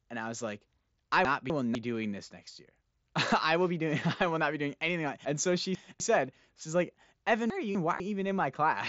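Chunks out of order occur at 1.25–1.75 s, 5.25–6.0 s and 7.5–8.0 s. Audio is cut into 250 ms pieces, and one piece is written late, landing after material that should follow it. In the first, between "I was like I" and "doing this next year", a quarter-second is swapped with its neighbour. At 5.25 s the late piece is displaced by half a second. The last comes after "she's like". Nothing is lost, but each spot sounds jumbled. Concealed Bluetooth headset packet loss occurs at 6.27 s, just before "she's like". About 7.5 ms of headset audio went missing, and the receiver filled the gap by repeating a well-matched stretch of the preceding waveform. Through the light graininess of the mSBC wideband link, this single patch is almost inaudible.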